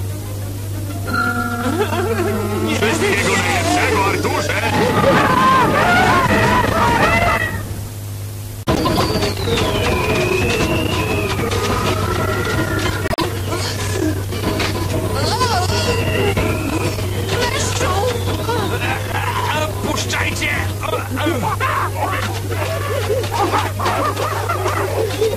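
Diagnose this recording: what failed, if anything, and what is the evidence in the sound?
Frames out of order at 8.75 to 9.02 s and 13.08 to 13.25 s, a network or storage fault: two neighbouring runs of frames, roughly 104 ms and 52 ms each, were swapped before decoding, giving a garbled flutter and no lost time.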